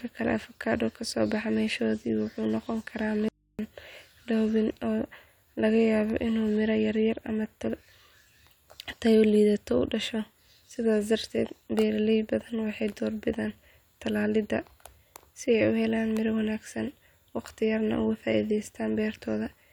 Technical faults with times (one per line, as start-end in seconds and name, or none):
3.28-3.59 audio dropout to a faint residue